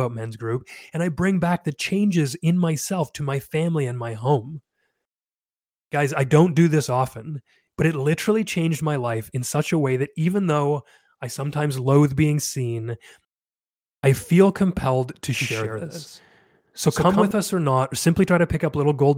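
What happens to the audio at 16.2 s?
A flat, echo-like second copy trails the speech by roughly 150 ms, about 5 dB quieter, from 15.41 s (after "I feel compelled to") to 17.31 s (before "us or not or"). This is a doubled audio track, likely from a slower second capture path.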